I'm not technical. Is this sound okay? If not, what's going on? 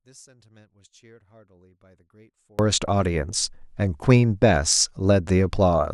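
No. From the start to about 2.59 s the speech nearly disappears, leaving only a faint trace, then returns to normal. The likely cause is one channel inverted: one side's signal is flipped upside down, so when both sides combine, the voice cancels itself out.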